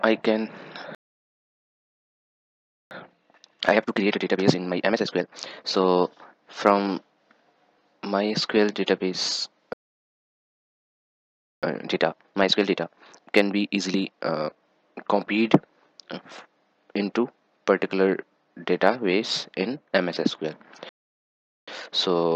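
At 0.95 s the sound cuts off mid-flow and stays silent until 2.91 s, a gap of about 1.96 s. This is a playback stall, likely caused by the player running short of data or its thread being blocked. What sets it apart from a dropout or an edit is that the output simply goes silent until the player recovers.

From 2.91 to 5.91 s comes time-compressed catch-up. The player removes the backlog by cutting out small slices and cross-fading the joins, so the sound runs at 1.5 times normal speed. Unlike a sped-up recording, the pitch stays where it was. Only the pace is hurried.

The same pair repeats later. A second stall runs from 9.73 to 11.63 s, about 1.89 s of silence, again likely from starved or blocked playback. It is followed by catch-up at 1.5 times speed from 11.63 to 14.63 s, with the same hurried rhythm at unchanged pitch.

A shorter stall from 20.89 to 21.68 s, about 0.78 s, likely has the same cause. 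A milder catch-up at 1.1 times speed follows and runs to the end of the audio. This last one is a gentler acceleration than the earlier two.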